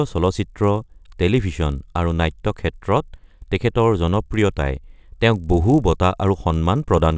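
Throughout, the resampler restarted on every block leaves an edge error each 20 ms: a 50 Hz buzz heard only under speech, unlike mains hum, which persists through pauses.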